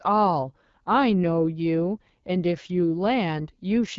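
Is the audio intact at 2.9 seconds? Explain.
No, at 2.9 s the speech carries the AMR wideband (HD Voice) codec damage present across the whole clip. The coder models speech with a pulse-driven vocal tract at a low rate, consistent with 8.85 kbit/s, so it sounds plainly rough and raspy, with nothing above 7.5 kHz.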